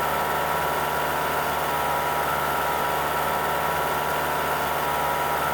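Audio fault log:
Nothing to log here, as there's no fault anywhere in the sound.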